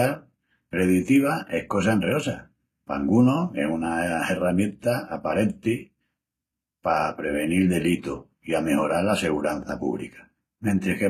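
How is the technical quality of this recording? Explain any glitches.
The recording has plainly audible codec damage running through the whole clip. HE-AAC compression, present throughout, is the likely cause: the lower spectrum is coded directly and the treble is rebuilt by copying lower bands upward, so harmonics misalign. S sounds turn gritty and metallic, nothing reaches above 14.9 kHz, and the coarseness fits a bitrate around 20 kbps.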